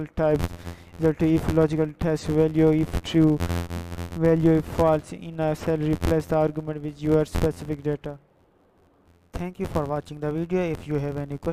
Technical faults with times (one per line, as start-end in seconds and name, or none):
0.00-11.52 filter restarted on every block